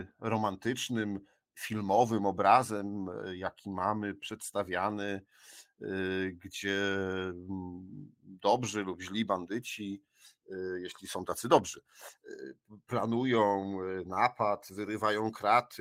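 No technical faults are audible.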